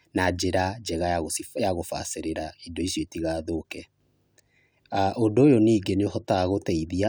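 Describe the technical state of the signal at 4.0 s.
The speech signal at 4.0 s is intact, with no audible technical fault at that moment.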